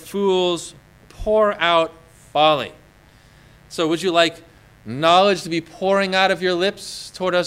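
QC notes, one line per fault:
Throughout, mains buzz: a steady, raspy buzz well below the signal, from switching spikes twice per 50 Hz cycle spreading harmonics into the kilohertz range.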